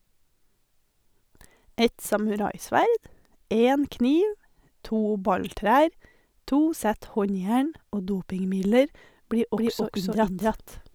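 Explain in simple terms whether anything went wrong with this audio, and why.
From 9.57 s to the end, a doubled audio track appears: an equally loud copy trails by about a third of a second, starting abruptly, without an echo's fading, likely from a second capture path.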